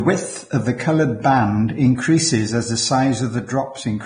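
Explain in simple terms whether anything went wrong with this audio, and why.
The speech sounds hissy and grainy from start to finish, with nothing at all above about 9.7 kHz, and that pattern points to heavy Vorbis compression, likely from saving at a low quality setting. The encoder throws away the top of the sound and rebuilds fine treble detail from coarse approximations, so sharp sounds turn to rustling noise and word onsets lose their crispness. A simple treble cut would sound dull but clean; here the remaining treble is rough and noisy.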